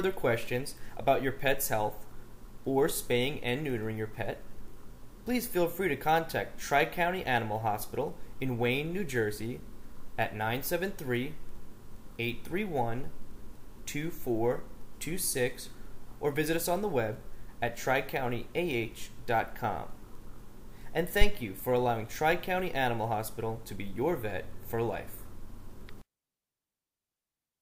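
At 21.21 s there's a phantom power thump: supply voltage switched on a live input, the step pushing through the coupling capacitors. You get a deep thud peaking around -9 dBFS, dying away in roughly 35 ms, and it's gone by 21.37 s.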